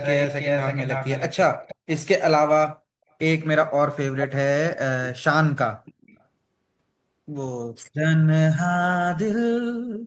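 From 0 to 1.75 s, an echo canceller, likely on a loudspeaker phone, failed to remove the returned speech. A copy trails the speech by 322 ms, nearly as loud. The same echo leak recurs from 5.85 to 6.2 s, delayed 391 ms and much fainter.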